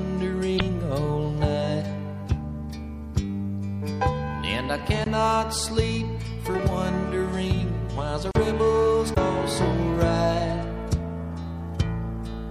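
The whole clip has a watery, swirly character with a hard treble ceiling. This is likely MP3 compression at a low bitrate, around 64 kbps. On a spectrogram it shows as a flat cutoff and flickering high-frequency patches.

From 0.56 to 0.61 s, damaged data in the compressed stream makes the decoder lose frame sync. You hear a brief disruption, with smeared broadband energy on the spectrogram.

Blocks of digital silence occur at 5.04–5.06 s (20 ms) and 8.31–8.35 s (40 ms), where the output went silent. Each sounds like a short hole, and the waveform shows a flat line with abrupt edges.

A second stretch of corrupted stream data, from 9.13 to 9.17 s, produces another brief disruption, visible as a vertical smear.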